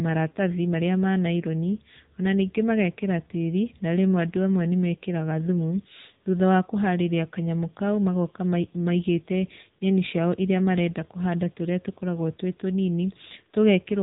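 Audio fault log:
throughout AMR narrowband mobile codec: the speech went through the AMR-NB phone codec, which keeps nothing above 4 kHz and rebuilds the voice from a vocal-tract model and sparse pulses, so it sounds muffled, buzzy and plainly synthetic, which fits a low rate near 8 kbps.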